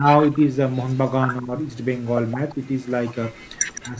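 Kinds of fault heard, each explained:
Speech suppressed in double talk: The talker's level dips in short pieces, by as much as about 20 dB. It happens five times, from the very start to the very end. The likely cause is an echo canceller turning down both sides while they overlap.
Echo leak: A delayed copy of the sound trails the original by 162 ms. It is very faint from 0.93 to 1.1 s. From 3.32 to 3.81 s it is louder, about 15 dB below the speech. This is likely loudspeaker echo that the far end's canceller missed.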